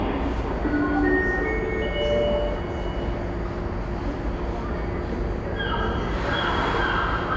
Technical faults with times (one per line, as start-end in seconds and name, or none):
none